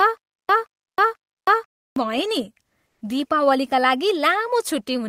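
The stream likely stalled repeatedly, causing a stutter with silent gaps. From the very start to 1.96 s, a 175 ms fragment replays three times, each followed by about 316 ms of dead silence.

At 2.87 s, the sender likely paused transmission, as Opus DTX does. The result is comfort noise in place of the background: the real background gives way to 140 ms of flat synthetic hiss, about 2 dB different, until 3.01 s.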